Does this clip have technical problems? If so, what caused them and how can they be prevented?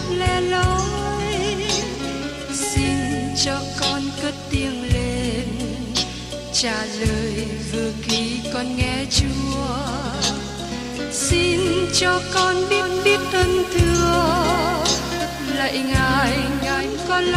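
Yes. At 12.62 s the sound shifts as the receiver's digital radio blends to analogue FM. The cross-fade takes about half a second. Steady hiss then appears, sitting around 25 dB below the programme. The level also shifts by about 2 dB. This is a hybrid radio losing its digital stream and falling back to the same station's FM signal. It returns to digital at 17.05 s. To prevent it, record with a stronger, steadier digital signal or from a direct feed.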